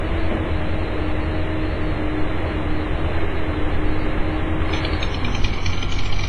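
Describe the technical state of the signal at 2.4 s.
At 2.4 s, as everywhere else, there's a ringing, washy hiss with nothing above 10.6 kHz, likely WMA compression starved at a low bitrate around 24 kbps.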